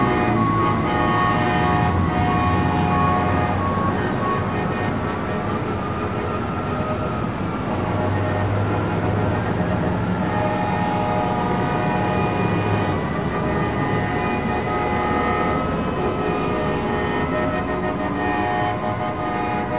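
No technical faults are audible anywhere here.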